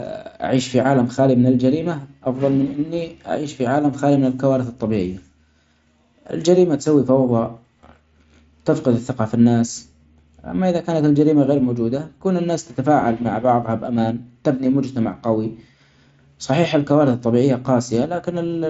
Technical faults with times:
none

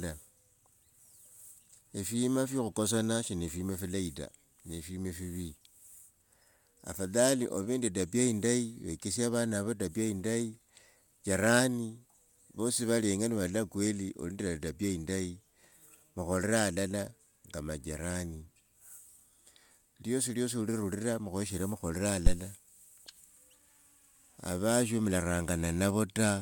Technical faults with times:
22.27-22.36 phantom power thump

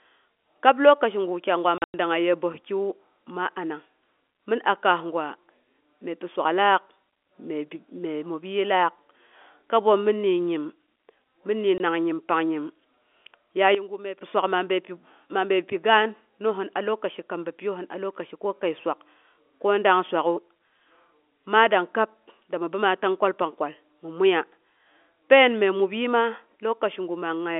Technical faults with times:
1.78-1.94 packet loss filled with silence
11.78-11.80 packet loss filled with silence
13.75-14.21 sudden gain jump

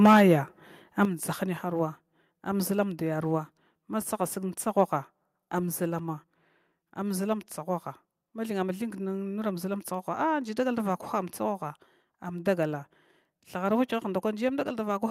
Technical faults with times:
0.04-0.21 microphone overload
0.06 microphone volume stepped down
1.05 microphone volume stepped down

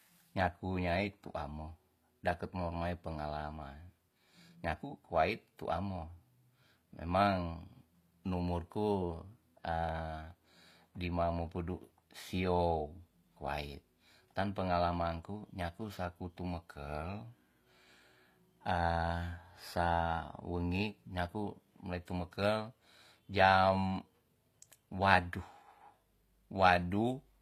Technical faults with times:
0.00-27.42 low-bitrate audio saved at a high bitrate

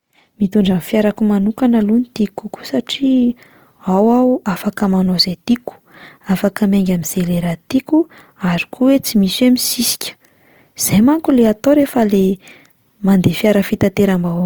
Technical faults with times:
0.00-14.45 Opus compression

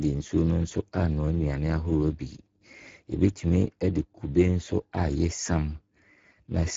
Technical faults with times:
0.00-6.76 Speex codec

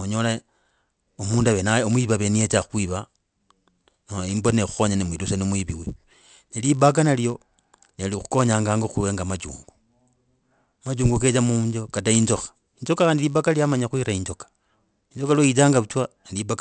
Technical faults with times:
0.00-16.61 resampler restarted on every block

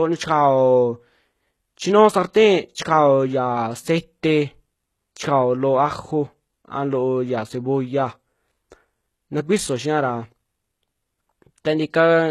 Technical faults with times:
0.00-12.30 HE-AAC compression

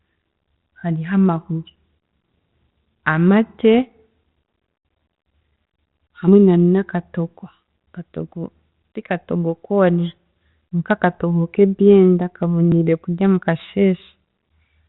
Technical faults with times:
3.74-3.79 bit errors on an ADPCM link
6.28 dropped buffer (overrun)
12.72 dropped buffer (overrun)

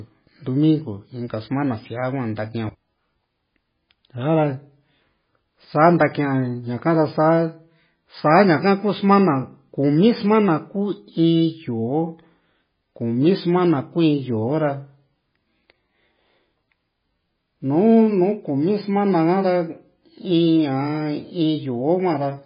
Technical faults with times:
0.00-22.45 MP3 compression

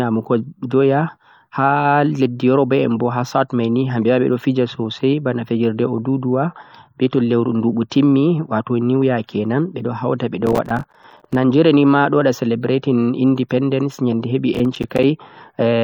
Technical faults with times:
3.34-15.83 adaptive stream at a lower bitrate
10.46-11.35 processor overload crackle
14.54-15.03 processor overload crackle

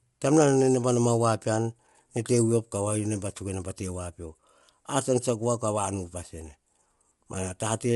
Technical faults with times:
0.00-7.96 low-delay AAC compression

